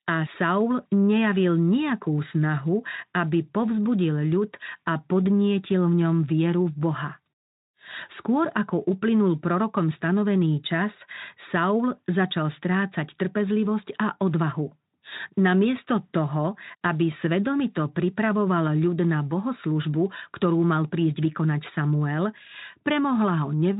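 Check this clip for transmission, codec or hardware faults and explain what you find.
No faults are audible.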